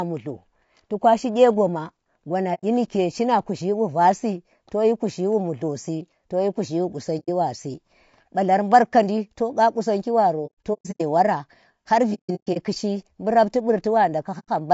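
Throughout, the speech sounds rough and grainy, with noise filling the gaps between harmonics and a thin, synthetic top band, plainly audible as low-delay AAC compression, likely AAC-ELD at about 32 kbps. A spectrogram shows smeared harmonics and hazy high frequencies.

AAC frame loss with muting then cuts soft-edged holes where lost frames were zeroed and the overlapping windows fade out and back in. Single gaps of about 90 ms fall at 2.54–2.64 s, just before "nike shima kuzhi wa", at 7.19–7.29 s, just before "wasi ba lar mbar", and at 14.39–14.49 s. Scattered bursts span 10.46–11.01 s, between "kandi to qa qusangi" and "wara har", and 12.14–12.58 s, with the longest runs about 100 ms and 150 ms. The waveform tapers to flat silence in each gap, and the spectrogram shows blank vertical bands.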